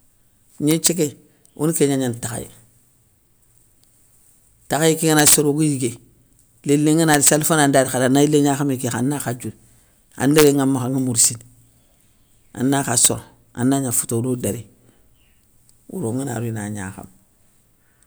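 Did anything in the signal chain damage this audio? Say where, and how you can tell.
Yes, integer overflow in sample-format conversion. Violent cracks at 0.71–0.87, 5.19–5.34, 7.14–7.29, 10.38–10.47, 11.25 and 13.05 s, where peaks overshoot by about 0–7 dB. They wrap to the opposite sign instead of flattening, so they sound far harsher than clipping.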